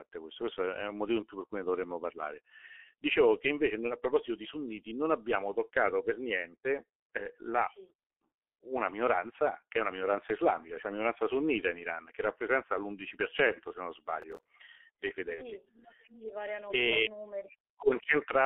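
From start to finish the speech passes through a G.723.1 codec, and the damage is heavy. The band is held between roughly 300 Hz and 3.4 kHz, so the voice sounds thin and muffled. The coarse, slowly updated voice model at a rate consistent with about 6.3 kbit/s adds a hoarse, rasping texture and smears consonants together, since the coder can only follow speech in broad 30 ms steps.

From 14.22 to 14.48 s a burst of processor overload crackle tears across the speech. The processing fell behind and missed a run of deadlines, each one sized to fit a buffer of about 10 ms, with around ten in a row over that quarter second. Every missed slot was filled with stale audio that was spliced in with hard edges, and together these splices produce the gritty, crackling sound that stops once the load clears.

At 15.35 to 15.42 s there is VoIP packet loss concealed by the speech codec. The gap fits the loss of a single 30 ms frame. 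The decoder bridged it by continuing from its last pitch and filter settings at a falling gain. This gives a short stretched, fading smear in place of real speech, and the voice stays weakened and coloured for a few tens of milliseconds while the decoder's internal state recovers.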